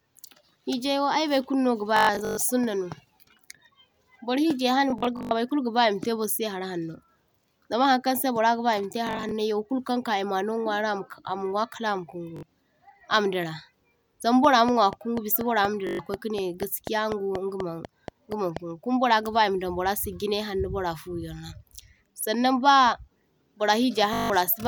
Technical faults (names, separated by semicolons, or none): Bluetooth stutter; train of clicks